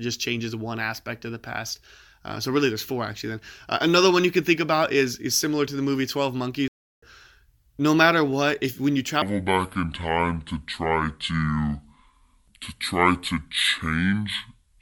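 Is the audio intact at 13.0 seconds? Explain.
No. From 9.22 s to 14.82 s the speech turns deep and dragging, at 0.639 times its proper speed and about seven semitones low, a section at the wrong speed. It was likely played back against the wrong clock, so pitch and tempo fall together.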